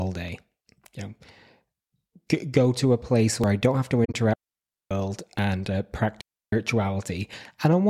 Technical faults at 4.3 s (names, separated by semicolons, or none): digital wireless dropout